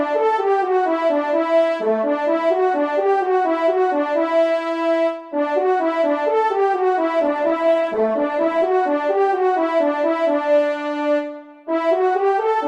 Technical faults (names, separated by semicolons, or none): call bitrate drop